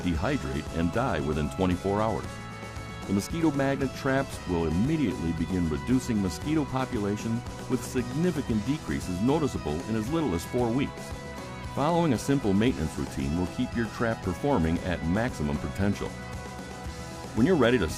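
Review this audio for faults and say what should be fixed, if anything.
Nothing in the signal calls for a fix: levels, continuity and timing hold steady throughout, with no audible disturbance anywhere in the recording.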